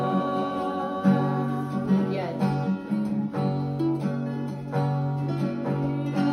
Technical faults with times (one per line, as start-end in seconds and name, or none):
0.00-6.32 computer activity noise